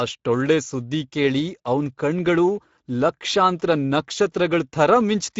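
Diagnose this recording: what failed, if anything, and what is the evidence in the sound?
The failure is at the codec stage: a Speex codec at a mid setting, roughly 16.8 kbps, runs through the whole speech clip. The damage is plainly audible. Nothing is present above 7.7 kHz. CELP coding starves the excitation of bits, roughening the speech throughout.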